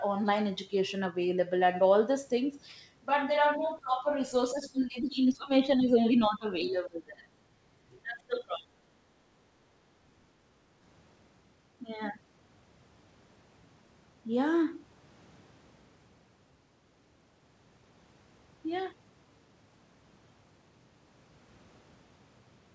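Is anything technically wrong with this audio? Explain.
Yes. Speech suppressed in double talk occurs at 3.58–3.64, 3.80–4.06, 4.52–6.46, 6.64–7.24 and 8.03–8.85 s. The talker drops in level, by about 25 dB at worst, likely because an echo canceller mistook overlapping speech for echo.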